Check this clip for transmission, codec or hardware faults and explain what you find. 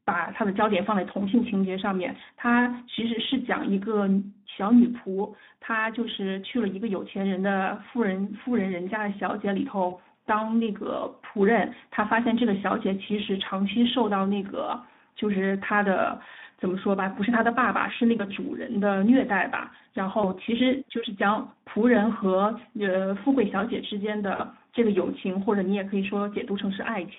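Two faults can be heard: Speex codec damage throughout, and four short dropouts covered by packet loss concealment.

The Speex codec coloration runs the full length of the speech. The band sits between about 150 Hz and 3.7 kHz, so there is no air above it. The rate is low, which fits roughly 11 kbps. At that rate the CELP coder has few bits left for the excitation. Voiced sounds come out rough and hoarse, with a grainy, noisy edge. The damage is plainly audible.

VoIP packet loss concealed by the speech codec occurs at 9.89 to 9.96 s, 18.17 to 18.32 s, 20.21 to 20.32 s and 24.35 to 24.44 s. Each of the first three points to one lost 20 ms packet. The last points to two, about 40 ms. The decoder repeats its last pitch and filter and lowers the gain. Each gap becomes a brief buzzy or noisy smear that fades. The sound stays weak for a moment after packets return.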